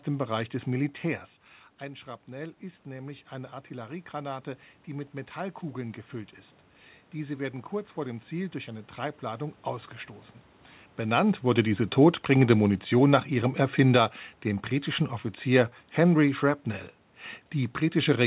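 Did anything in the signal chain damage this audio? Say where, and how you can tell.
Yes. The damage is in call processing. Automatic gain rising runs from 1.78 to 6.08 s. Near 1 s the talker moves back, and the level drops about 15 dB. The gain control then slowly adds about 6 dB. Room noise swells with the voice.

Automatic gain falling runs from 11.05 to 14.1 s. Near 11 s the talker moves. The control then trims about 4 dB over three seconds. Voice and background sink together, all band-limited to 4 kHz by the G.711 codec.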